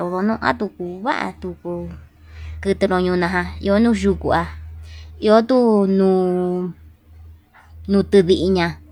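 Nothing technically wrong turns up anywhere in this short bit of speech, so there's no fault to point to and no cause to chase.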